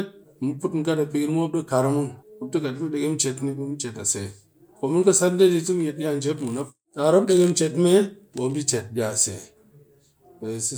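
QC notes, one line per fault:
No faults found.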